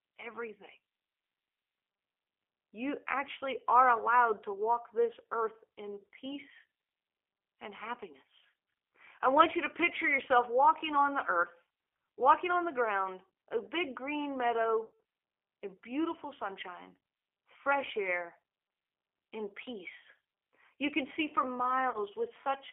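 From start to finish, the speech carries the sound of the G.729 codec. It is confined to a telephone band of about 300 Hz to 3.4 kHz. Nothing bright survives above that. The coder rebuilds each 10 ms frame from a vocal tract filter, a pitch predictor and a few pulses. The sparse pulses give a rough, slightly synthetic texture, and the damage is plainly audible. The result fits an 8 kbit/s stream.

At 14.86 s, VoIP packet loss concealed by the speech codec sets in and runs to 14.96 s. Around 140 ms of audio is missing, which fits about seven lost packets. The decoder repeats its last pitch and filter with falling gain. The sound smears into a fading buzzy tone or coloured noise. At 21.90 s a shorter loss of about 40 ms follows, ending at 21.99 s. It gives a brief concealed stretch and a weak or distorted onset afterward.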